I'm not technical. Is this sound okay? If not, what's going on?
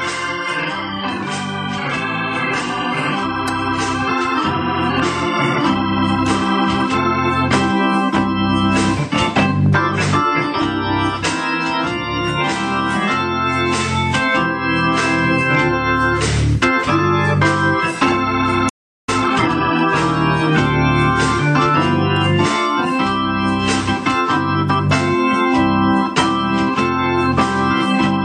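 No. At 18.69 seconds the sound cuts out completely, and nothing plays until 19.09 seconds, a gap of about 0.39 seconds. This is a playback stall, most likely because the player briefly ran out of audio to play or was held up. Unlike a crackle, there is a clean silence, and then the sound carries on.

Right after the gap, from 19.09 to 19.85 seconds, the player makes up for lost time with time-compressed catch-up. It plays that stretch at 1.5 times normal speed by trimming out tiny slices and blending the joins, so the sound feels rushed. The pitch stays the same, which is how you can tell it apart from a recording simply sped up, which would sound higher and squeakier.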